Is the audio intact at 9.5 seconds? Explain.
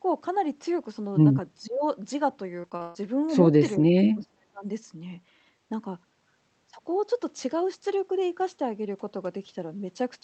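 Yes, the speech at 9.5 seconds is intact, with no fault at that moment.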